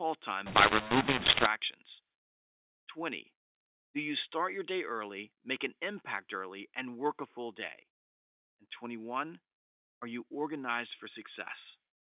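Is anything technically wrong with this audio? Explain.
Yes. From 0.46 to 1.46 s, mu-law and A-law are mixed up: telephone samples coded as mu-law are decoded as A-law, scrambling levels into harsh distortion and lifting quiet stretches into noise.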